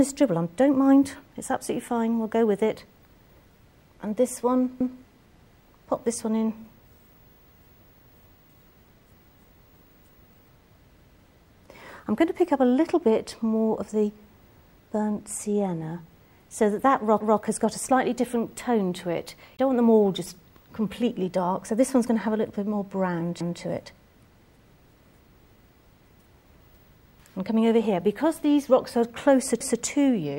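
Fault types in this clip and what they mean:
Overlapping chunks: at 4.81, 11.01, 17.21, 23.41 and 29.61 s. The audio was cut into 6-second blocks that each start 200 ms before the previous one finished, so that fifth of a second plays twice at every join. It is heard as a regular stutter.
Damaged data in a compressed stream: a brief blip from 19.55 to 19.59 s, about 40 ms long, where corrupted bytes threw the decoder out of sync. It garbled those frames before locking onto the next valid header.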